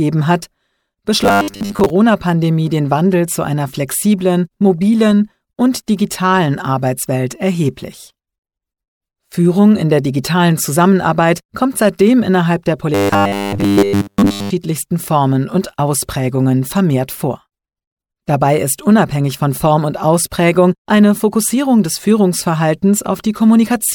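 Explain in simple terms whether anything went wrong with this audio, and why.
Two stretches show robotic sound from repeated short buffers, most likely because new audio was arriving too slowly. The playback filled each gap by replaying the last few milliseconds over and over, skipping the real audio. Those loops impose a steady 100 Hz buzz, which fits a repeat about 10 ms long. From 1.24 to 1.9 s most of the sound turns metallic and rigid, and from 12.94 to 14.50 s all of it does.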